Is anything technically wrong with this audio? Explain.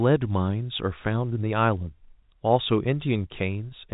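No, nothing technically wrong stood out on listening to this telephone-band speech.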